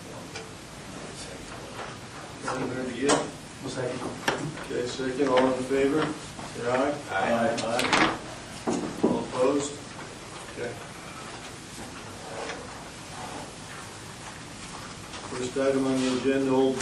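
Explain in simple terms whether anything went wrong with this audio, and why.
Nothing went wrong here; no faults can be heard.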